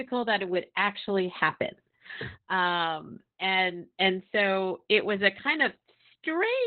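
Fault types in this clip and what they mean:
Opus voice compression: the speech was squeezed through Opus's SILK coder at a very low rate, which fits about 8 kbps, with the band narrowed to roughly 4 kHz and the excitation coded coarsely. Nothing survives above about 4.4 kHz, so the speech sounds muffled, hoarse and faintly robotic throughout.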